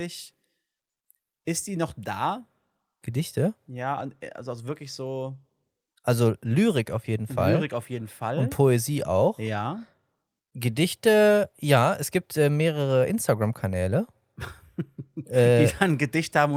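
No technical faults can be heard at any point in the recording.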